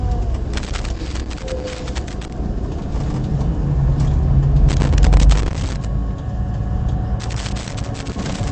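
Loose connector crackle breaks into this recording of everyday sounds from 0.53 to 2.33 s, again from 4.69 to 5.85 s, and from 7.2 s through to the end. In each burst the signal is chopped by a contact that keeps making and breaking as it shifts. Any DC on the line turns each break into a pop, so the sound is an irregular scratchy crackle rather than steady noise. Throughout the clip there is also a watery, swirling texture, smeared attacks and nothing above about 8.3 kHz. This is likely MP3 compression at a low bitrate, which fits something around 48 kbps. Short of bits, the encoder cuts all treble above a fixed point and drops weaker frequency lines, which flicker on and off from frame to frame and leave the damage plainly audible.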